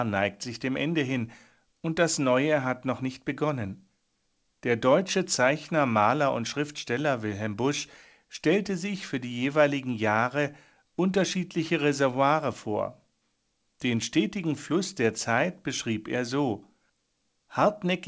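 No technical faults detected.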